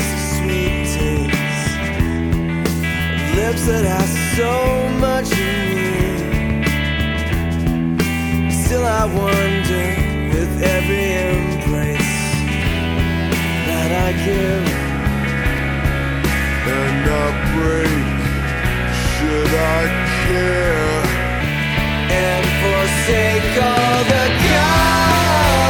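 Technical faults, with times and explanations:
12.62 s and 15.58 s, block of digital silence: two dropouts, about 2.5 ms and 2.7 ms long, where the signal falls to zero and returns without any fade. The second matches 128 samples, which points to a small output buffer that was not filled in time. Each hole is too short to hear as a gap, so each comes across as a sharp tick. On a waveform it is a flat line at zero with abrupt edges. On a spectrogram it is a thin vertical broadband streak.
14.71 s to 21.41 s, section at the wrong speed: for about 6.7 seconds the audio plays at 0.834 times its proper speed, so everything slows and drops about three semitones in pitch at once. The likely cause is playback or editing against the wrong clock. On a spectrogram, every harmonic line shifts down by the same ratio at the boundaries, and events appear stretched in time. On a waveform, the envelope of that section looks drawn out.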